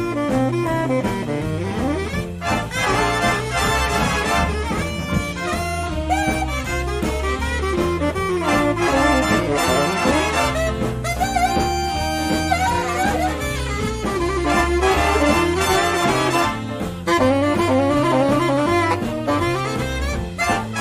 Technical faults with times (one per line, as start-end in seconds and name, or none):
none